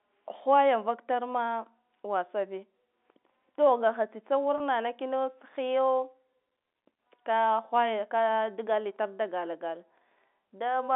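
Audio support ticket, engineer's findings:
Packet loss with pitch repetition, 4.58 to 4.60 s: 20 ms gap, consistent with one lost packet, bridged by repeating the last pitch period, so a brief held, buzzy tone. Waveform shows identical repeating cycles; spectrogram shows flat, frozen harmonics within the 250 Hz to 3.6 kHz G.711 telephone band.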